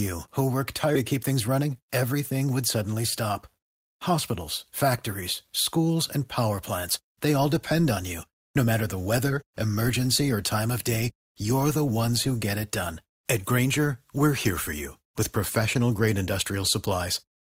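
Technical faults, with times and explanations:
0.95–0.97 s, skip ahead: roughly 0.4 s of speech was dropped, likely by an overflowing jitter buffer, so playback jumps forward with no gap between the joined sides.
1.13–2.48 s, jitter buffer speed-up: short pitch-period pieces, about 150 ms in total, were repeatedly removed to cut delay, so speech runs at 109% speed with unchanged pitch and sounds hurried.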